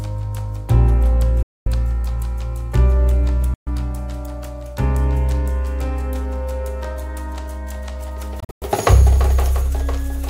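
Bluetooth dropout, likely, at 1.43 s, 3.54 s and 8.40 s. The audio cuts to abrupt silence for about 235 ms, then about 128 ms, then in broken bursts spread over about 213 ms, the longest about 107 ms. Each time it resumes further along, as though it had kept playing. That fits packets arriving too late at the headphones and being discarded.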